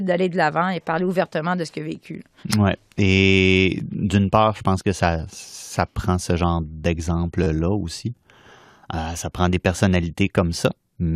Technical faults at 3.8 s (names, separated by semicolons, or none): repeated buffer